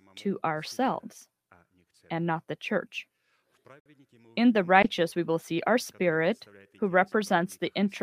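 At 3.80 s, two separately encoded pieces were joined without trimming the encoder's start delay and end padding, leaving a gap at a join of encoded pieces, which fits pieces about 4 s long. A gap of about 59 ms cuts in with smeared edges before the sound resumes where it stopped.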